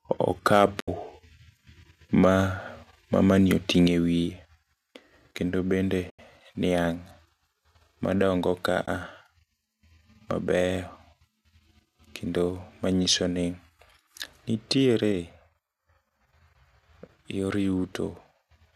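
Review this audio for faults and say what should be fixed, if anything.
From 0.52 to 0.66 s the loudest speech peaks flatten with a harsh, crackling edge, about 3 dB past the converter's limit across a small share of samples. This is likely microphone overload, with the converter cutting off waveform tops. Unlike codec roughness, the grit appears only on peaks. Lowering input gain at the source would prevent it.

AAC frame loss with muting leaves soft-edged silent holes at 0.80 to 0.88 s (80 ms), at 6.10 to 6.19 s just after "kendo bende" (90 ms), and at 8.86 to 8.88 s (20 ms). The decoder zeroes the missing frames, and overlapping windows fade out and back in. The fade sets these holes apart from a hard dropout. Packet-loss concealment or forward error correction would fill them.

Level drops suddenly at 3.87 s by about 4 dB and at 15.12 s by about 3 dB, with speech and background falling together. 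The likely cause is the microphone volume being stepped down by automatic gain control. A gain step shifts everything at once, so it cannot be mistaken for someone moving away from the microphone. Disabling automatic input-gain adjustment would prevent it.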